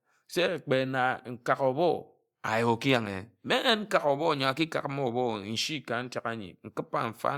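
Speech, with nothing technically wrong with it.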